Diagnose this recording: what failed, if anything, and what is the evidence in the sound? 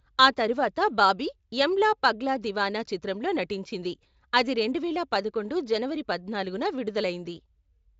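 Nothing in this speech recording points to a failure at any stage of the chain. The Speex codec path sounds like it is running at a high setting, which fits a rate of around 34 kbps, and it leaves at most faint traces on the sound.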